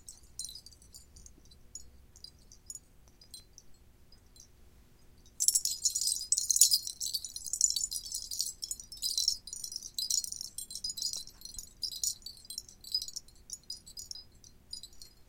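From 3.08 to 3.72 s, five short ticks repeat at a steady rate, and from 11.01 to 11.33 s three more follow at the same spacing of about six per second. These are CD scratch ticks. A blemish on the disc wipes out more data than error correction can rebuild on each rotation, so the player patches or mutes a brief run of samples, lasting at most a couple of milliseconds. A spectrogram shows thin, evenly spaced vertical streaks, and a waveform shows tiny flat or notched gaps.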